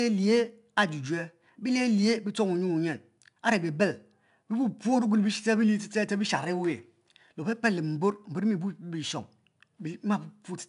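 Speech runs through 4-bit ADPCM compression for the whole clip, with plainly audible damage: a gritty hiss rides on every loud syllable and rises and falls with the level, and sharp onsets sound roughened where the adaptive step size lags behind. Nothing reaches above 10.6 kHz, which fits a sample rate near 22 kHz and roughly 89 kbps. Unlike a perceptual codec's swirly, warbling artefacts, this noise is broadband and tracks loudness directly.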